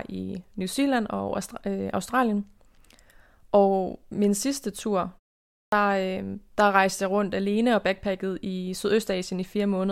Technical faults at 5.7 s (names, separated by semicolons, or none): clipped start after a pause